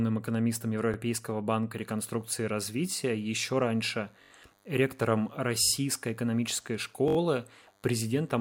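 A speech clip with two kinds of fault. The first is a repeated buffer. At 0.94 s a slice of about 21 ms plays twice, giving a brief click-like stutter. At 4.22 s, 5.63 s and 7.08 s a slice of the same length repeats four extra times, making a stutter of about 85 ms each. The joins are hard. The slice length fits a 1024-sample buffer. Playback starved, so the device replayed its last block until fresh audio arrived. Little or no audio seems to be lost. The second fault is DECT cordless phone buzz. From 1.76 s to the end, a thin, steady buzz sits under the speech. It is at 100 Hz, with many harmonics. Its level is about 40 dB below the speech. A nearby DECT handset or base sends a radio burst every 10 ms. The audio circuit rectifies those bursts into sound.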